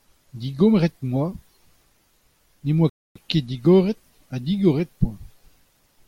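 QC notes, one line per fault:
2.90–3.16 s, rebuffering stall: the speech drops to silence for about 260 ms, then picks up exactly where it left off, with nothing skipped. The player ran out of downloaded audio and waited for more data, so the gap adds time rather than removing any.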